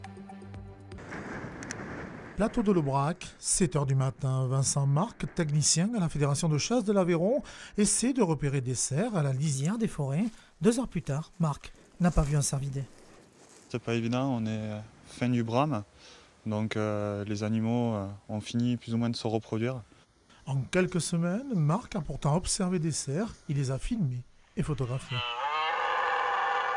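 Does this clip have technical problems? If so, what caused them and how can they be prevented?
Yes. From 9.54 to 13.65 s the sound turns faster and brighter, running 1.09 times quicker and about 1.5 semitones higher. This is a wrong sample rate: audio played back unconverted, which fits 22 kHz material played at 24 kHz. Resample explicitly whenever source and output rates differ.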